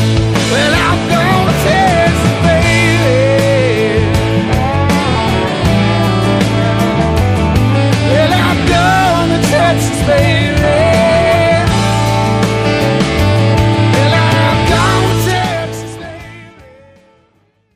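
No technical faults are audible.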